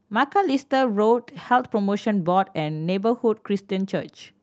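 No technical fault can be heard in the speech; it carries the ordinary character of a call codec such as Opus, with the high end stopping around 8 kHz.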